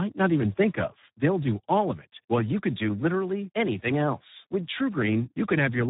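Throughout, heavy Speex codec compression, consistent with roughly 8 kbps, starves the excitation, leaving the speech hoarse and noisy, with nothing above 3.8 kHz.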